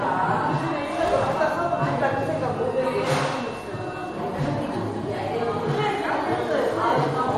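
MP3 compression runs through the whole clip, most likely from a low-bitrate encode of around 48 kbps. The sound turns watery and swirly, with smeared attacks and metallic chirps. A spectrogram shows nothing above 16 kHz and patchy holes where weak bands blink on and off.

At 1.08 s an electrical switching spike adds a sharp, tight snap, likely from a nearby switch or static discharge arcing into the line. On the waveform it is a near-vertical spike about 2 ms wide; on a spectrogram, a thin full-height vertical line.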